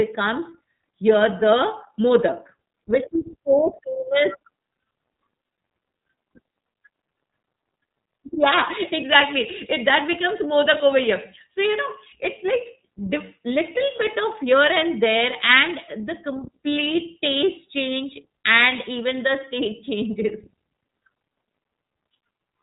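From start to finish the speech has been through the iLBC codec, and you can hear it plainly. Nothing gets past about 3.8 kHz, so it's dull and narrowband, with a slightly rough, synthetic edge from coding each frame independently. That fits the 13.33 kbps mode with 30 ms frames.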